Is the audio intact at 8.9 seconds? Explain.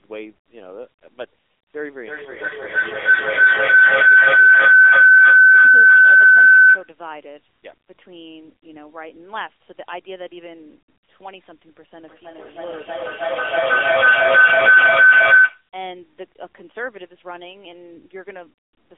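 No. At 8.9 seconds the speech passes through the AMR narrowband mobile codec, as it does for the whole clip. The codec rebuilds the voice from a vocal-tract model driven by a few pulses in each 5 ms. The band runs from about 250 Hz to 3.5 kHz, and nothing above 3.8 kHz comes through. The damage is plainly audible: a thin, buzzy, synthetic voice. That coarseness fits a low rate near 8 kbps.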